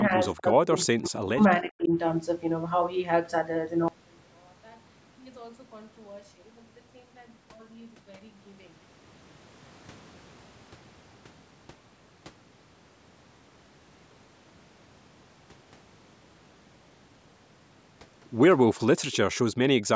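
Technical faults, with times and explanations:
0.02–0.19 s and 0.36–1.9 s, speech suppressed in double talk: The first stretch dips only slightly. The second loses about a second in pieces and at its worst falls almost to silence. Likely the echo canceller, faced with both sides talking, turned down the near talker along with the echo.
1.04–1.08 s, 1.81–1.85 s and 19.12–19.17 s, echo leak: Brief scraps of the voice return 385 ms late. The first is barely audible, the later two faint but clearer. This is likely a loudspeaker's echo that the far end's canceller didn't fully remove and sent back.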